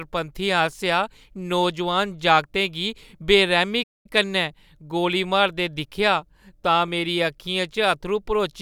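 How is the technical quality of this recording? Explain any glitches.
The speech has one clear glitch, a playback stall. From 3.83 to 4.06 s the sound cuts out mid-flow for about 216 ms, then resumes with "कन्नै गोली मारदे दिक्खेआ". The likely cause is the player running short of data or its thread being blocked, so output fell silent. A waveform would show a flat gap and a spectrogram a blank vertical band.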